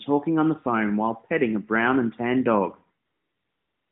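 After "brown and tan dog", from 3.06 s to the end at 3.91 s, AMR comfort noise replaces the real background. The phone stopped sending speech frames, and the receiver synthesised a smooth, steady hiss from a coarse estimate of level and spectrum. Unlike a gate cutting to dead silence, sound remains, but it switches in abruptly and is uniform and featureless. Because it passes through the narrowband AMR-NB path, the hiss stays within the line band, roughly 150 Hz to 3.7 kHz.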